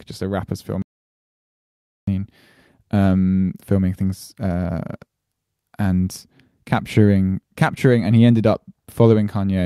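A speech recording in which the sound cuts out to silence, with no room tone, from 0.82 s to 2.07 s: an audio dropout to silence losing about 1.25 s, most likely from a lost input link.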